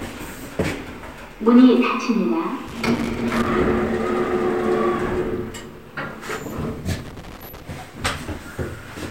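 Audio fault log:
2.68–3.47 s and 6.99–7.62 s: loose connector crackle. Two irregular bursts of scratchy crackle break into the sound, the first lasting about 0.8 s and the second about 0.6 s. A worn or dirty contact is making and breaking rapidly as it shifts. Each break chops the signal into ragged fragments. Any DC on the line turns the sudden jumps into pops. The result is uneven crackling, not a steady noise.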